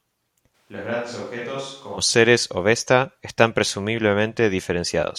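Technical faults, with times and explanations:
0.56–1.97 s, switch to a distant microphone: the speech abruptly turns roomy and hollow, thinner in the bass and roughly 10 dB quieter, with room noise near 35 dB below it, likely because a farther microphone replaced the close one before the sudden return.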